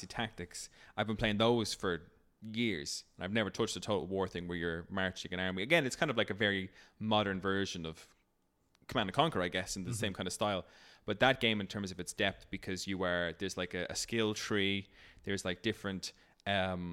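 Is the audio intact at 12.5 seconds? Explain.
Yes, at 12.5 seconds the speech runs on intact, with no dropout, click, distortion or other fault to be heard at that point.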